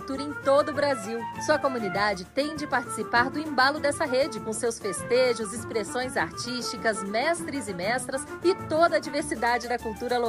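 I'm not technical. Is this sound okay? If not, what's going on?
Yes, nothing in this recording points to a technical problem with the signal itself.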